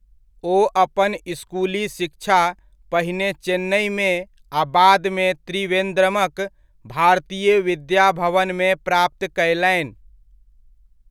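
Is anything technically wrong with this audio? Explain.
No, the signal shows no technical faults at any point in this speech recording.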